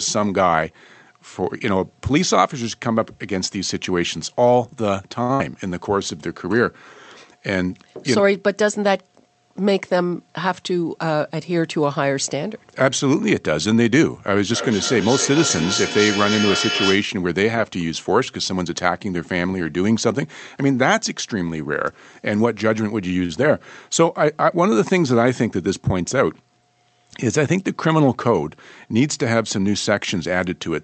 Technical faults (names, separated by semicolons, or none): short stall from a late packet; burst of packet loss; jitter buffer speed-up; feedback echo between two devices